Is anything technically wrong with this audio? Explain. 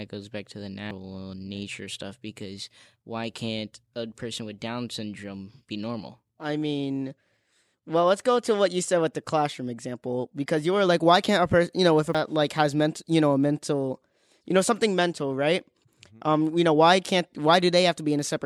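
Yes. Compressed frames skipped occurs three times, at 0.91 s after "goes back to the", at 6.30 s after "syndrome be normal", and at 12.15 s after "you know if a". Each time, whole compressed frames never reached the output, either missing or rejected by the decoder. The jumps of about 0.3 to 0.4 s fit three or four frames of roughly 93 ms. The speech leaps ahead by the length of the missing frames.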